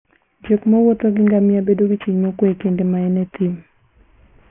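Aliasing runs through the whole speech clip. The sound was resampled down without an anti-alias filter first, in a way that fits a drop from 48 kHz to 6 kHz, so everything above the 3 kHz fold point reflects back below it as unrelated tones. Sibilants and breathy consonants come out gritty and metallic, with spurious components sitting roughly 30 dB under the signal, and the spectrum stays dense right up to the 3 kHz edge.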